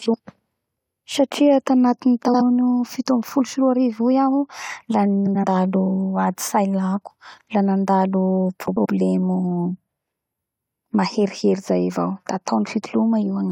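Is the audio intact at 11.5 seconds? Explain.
Yes, the speech runs cleanly through 11.5 seconds with no dropout, click, distortion or other break in the sound at that moment.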